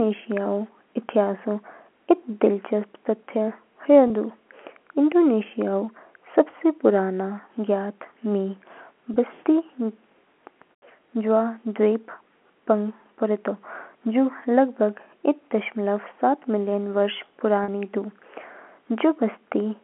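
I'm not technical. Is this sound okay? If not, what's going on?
No. There is packet loss with pitch repetition: bits of speech went missing in transit, and the receiver repeated the last fragment to fill each gap. You hear a brief buzzy hold at 4.08 to 4.10 s, 9.14 to 9.16 s, and slightly longer at 17.64 to 17.68 s.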